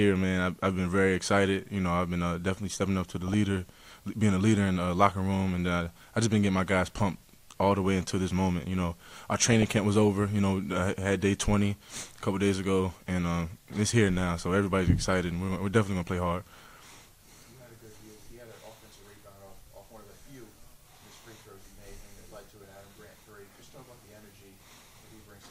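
Three short bursts of DAB burbling occur, from 3.04 to 3.34 s, 9.52 to 9.77 s and 22.50 to 22.80 s. Weak reception let bit errors slip through error correction into the MP2 data, so corrupted samples and scale factors throw individual sub-bands to wrong levels frame by frame. The first points to the highest error rate, around 0.3 percent, and the later two to roughly half that.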